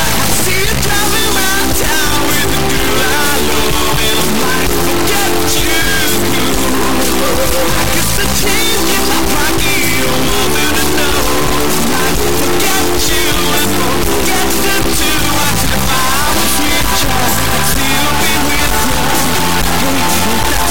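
From start to finish the audio suffers an integer read as float fault, which fits 32-bit integer samples being taken as 32-bit float values. Most bit patterns then decode as tiny numbers or as huge ones far past full scale, so the output slams between silence and the clipping limit. It sounds like an extremely loud, harsh square-wave buzz that falls silent in the quietest moments. Ordinary clipping would still follow the original waveform; here the original shape is gone entirely.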